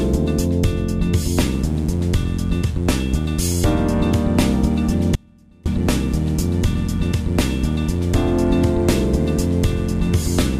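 At 1.55 s a mains buzz starts and continues to the end. It has the raspy, edged quality of switching spikes from a dimmer or rectifier, or of an unshielded line picking them up, which recur twice per cycle of the 60 Hz supply and produce harmonics reaching well into the kHz range. The buzz sits at roughly 15 dB below the signal.

From 5.15 s to 5.66 s there is an audio dropout to a faint residue lasting about 0.51 s. The signal collapses abruptly, and the gap holds a faint trace of the sound, roughly 30 dB down, before the full level returns just as suddenly. That points to the wanted feed likely being lost upstream while the downstream path stayed live and still carried a small leak. The hard edges at both ends distinguish it from a natural pause or a fade.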